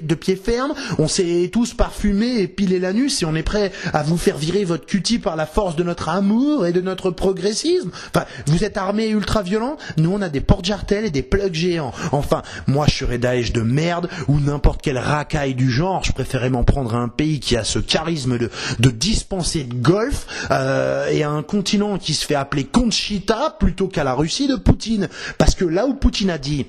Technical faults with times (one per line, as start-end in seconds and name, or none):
none